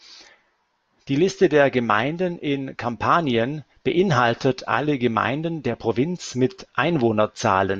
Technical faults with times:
none

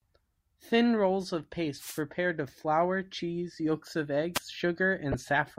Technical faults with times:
1.76-2.02 wireless microphone noise hit
4.34-4.39 wireless microphone noise hit
5.12-5.14 corrupt frame decoded

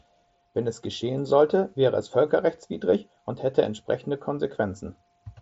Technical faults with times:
none

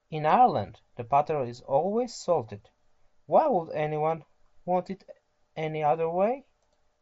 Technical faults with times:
none

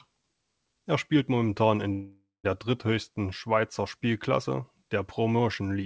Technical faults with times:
1.92-2.46 call audio freeze

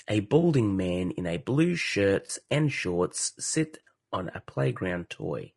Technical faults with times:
0.00-5.56 low-delay AAC compression
0.41-0.44 AAC frame loss with concealment
2.27-2.30 AAC frame loss with concealment
3.87 AAC frame loss with concealment

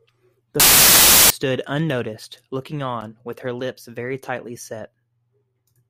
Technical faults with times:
0.60-1.30 samples built from the wrong bytes

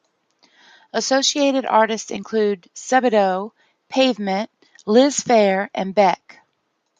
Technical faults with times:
2.16 lost LE Audio frames
3.88 lost LE Audio frames

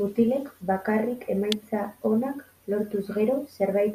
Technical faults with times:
1.52 electrical switching spike

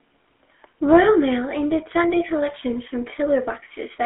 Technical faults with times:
0.00-4.05 GSM full-rate codec

